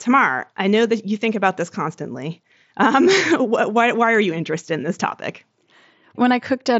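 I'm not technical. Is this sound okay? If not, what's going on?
Yes, this sound is okay, and there's nothing going wrong in it.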